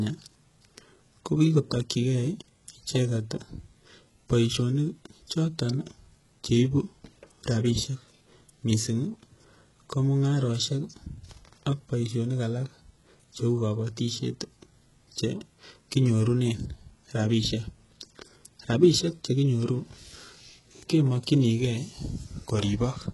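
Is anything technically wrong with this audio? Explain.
Yes. Throughout the speech, the treble sounds synthetic. Nothing is present above 11.5 kHz. The top band is gritty and metallic, and s sounds come out lispy. The likely cause is heavy HE-AAC compression, at a rate that fits roughly 12 kbps. At that rate only the lower spectrum is coded. The upper band is rebuilt by copying lower bands upward under a coarse envelope. Its harmonics no longer line up with the real ones below.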